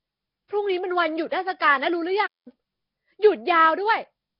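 The speech was likely passed through Nellymoser compression at a starved bitrate, leaving nothing above 5.3 kHz and a rough, hissy, underwater smear throughout. At 2.26 s a playback stall, likely the player running short of data, drops the sound into silence for about 0.2 s until 2.48 s.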